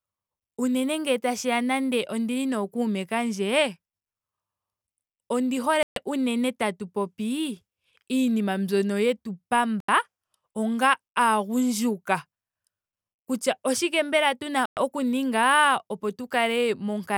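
At 5.83 s the speech drops to dead silence for about 134 ms and comes back on "unene tatu"; at 9.80 s it happens again after "iinima mbyono yetu", an 82 ms gap; and at 14.66 s a 113 ms hole sits between "oshike mbela" and "oku ninga opo". Each time it picks up again. That pattern is likely a Bluetooth stall, with interference holding up packets until the headphones' buffer ran dry.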